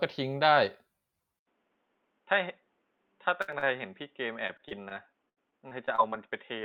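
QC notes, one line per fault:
1.39 s to end, input switched to a poorer device: after an 80 ms silence the speech turns dull and boxy, with nothing above 3.8 kHz, about 5 dB quieter and over new background noise about 45 dB down, likely a change to a narrower-band microphone or headset profile.
3.41–3.71 s, 4.33–4.93 s, 5.29–6.14 s, repeated packet loss (robotic sound): holes in the stream arrive in quick succession, each patched by extending the preceding sound, with gaps up to 76 ms. This makes the speech choppy, with fragments missing between the patches.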